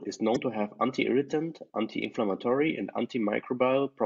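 At 0.33 to 0.37 s the speech is hit by damaged data in a compressed stream: for about 40 ms the decoder is fed corrupted frames, misreads them and loses sync until it finds a valid frame header again. The result is a brief chirp, squawk, click or short hole in the speech.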